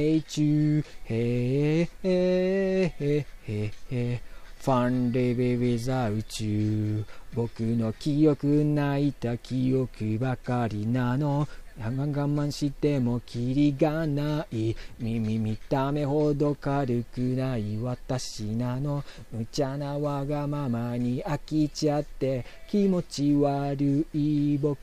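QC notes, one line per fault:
18.33–23.36 s, sample clock jitter: for about five seconds the converter's clock wanders, so each sample is captured a little early or late, by an error of a few microseconds. The timing error matters most where the waveform moves fastest, so the result is a hiss and roughness riding on the sound, strongest on loud and bright passages and gone in quiet moments. The added noise sits roughly 35 dB below the signal, enough to grain the sound without masking it.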